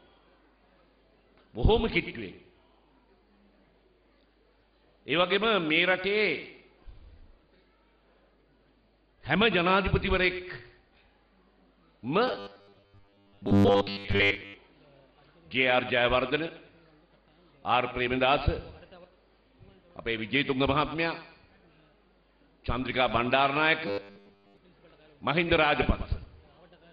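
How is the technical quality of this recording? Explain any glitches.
The recording has two glitches of the same kind: robotic sound from repeated short buffers, from 12.28 to 14.54 s and from 23.87 to 24.57 s. Fresh audio was likely arriving too seldom, so the playback repeated 10 ms chunks for most of each stretch and skipped the real audio. The repetition imposes a rigid, metallic 100 Hz buzz on the sound.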